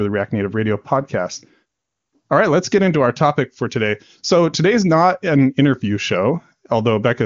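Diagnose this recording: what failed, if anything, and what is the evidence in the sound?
Nothing here failed; the speech comes through the AMR wideband (HD Voice) link with nothing wrong to point to, and whatever that codec leaves behind is faint at most.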